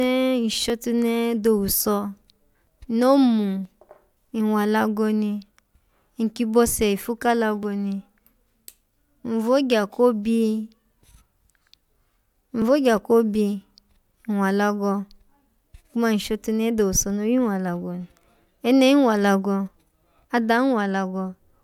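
Speech, with the small skips you get from overlap between stream segments: tiny skips at 0.70, 1.69, 2.67, 3.65, 7.63 s (just after "ifu ka"), and 12.62 to 12.64 s. They land roughly on 1-second segment boundaries, where overlapping time stamps make the player trim audio that wasn't actually doubled. Each cut drops about 6 to 20 ms, so the waveform jumps and you hear a tiny skip.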